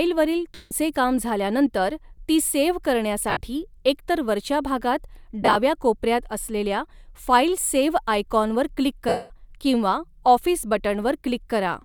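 Lost LE Audio frames occur at 0.55 to 0.71 s, before "काम झाल्यानंतर ती सेव्ह", then 3.30 to 3.41 s and 5.42 to 5.56 s, scattered, and at 9.09 to 9.30 s. The decoder repeats the last spectrum with random signs, so speech smears into noise, and the longer gaps fade.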